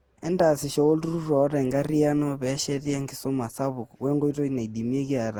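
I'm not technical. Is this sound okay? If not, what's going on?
No. The whole clip has generation loss: it sounds swirly, hollow and smeared, and the start of each sound is blurred. It was likely compressed and re-saved around ten times, with each pass adding damage, so it sounds worse than a single low-quality save would.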